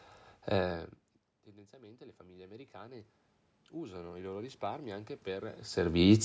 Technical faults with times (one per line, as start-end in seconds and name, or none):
0.53-1.46 automatic gain falling
1.45-3.11 automatic gain rising
3.80-6.04 automatic gain rising